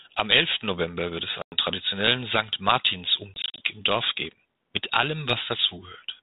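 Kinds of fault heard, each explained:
Packet loss on an ADPCM call: speech drops into hard-edged silence for about 100 ms at 1.42 s, then in short scattered gaps from 3.34 to 3.66 s. The decoder's predictor loses track, so speech comes back a bit off until it catches up.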